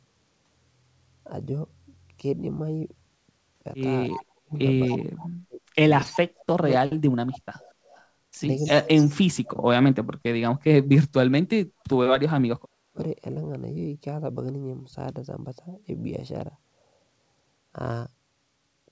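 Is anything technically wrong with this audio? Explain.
Yes. The speech carries two faults, both typical of a hands-free call.

Echo leak at 4.11–4.24, 4.89–4.98, 6.00–6.19, 7.31–8.05 and 8.58–9.11 s: a delayed copy of the speech trails 240 ms behind, about 15 dB below the speech in the first three and about 20 dB below in the last two. Likely the far end's echo canceller let loudspeaker pickup through. On a spectrogram, faint duplicate harmonic traces appear shifted 240 ms right.

Speech suppressed in double talk within 4.28–6.92, 8.6–11.47 and 12.39–13.0 s: while both sides overlap, the speech dips and drops out in pieces, by up to around 40 dB, over roughly 1.5 s, 2 s and half a second respectively. The likely cause is an echo canceller turning everything down when it couldn't separate talker from echo. The waveform envelope collapses in chunks, leaving dark holes on the spectrogram.

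Across the clip, the G.722 call path leaves nothing above 8 kHz.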